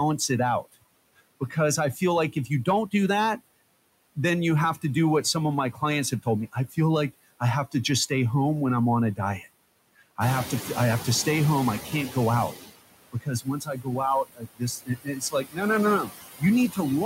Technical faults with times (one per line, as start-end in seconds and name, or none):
0.00-17.06 noise suppressor artifacts
0.65-3.40 speech cut by the noise suppressor
5.73-6.76 speech cut by the noise suppressor
9.16-10.19 speech cut by the noise suppressor
10.20-12.57 noise suppressor catching up
13.12-17.06 speech cut by the noise suppressor